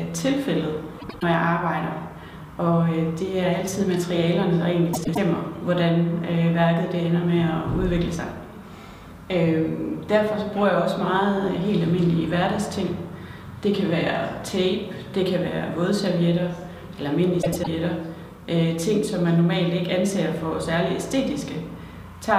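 Frames out of order occur at 0.99–1.23 s, 4.93–5.18 s and 17.42–17.68 s. In each, two adjacent blocks of about 104.5 ms (consistent with runs of four frames) play swapped, giving a brief garbled flutter and no lost time.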